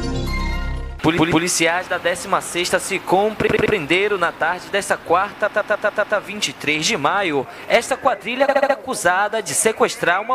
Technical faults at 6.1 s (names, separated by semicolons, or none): repeated frames